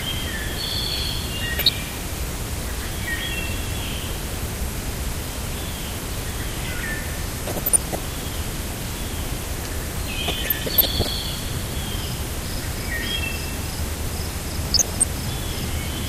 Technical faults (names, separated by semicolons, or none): MP2 compression; DAB burbling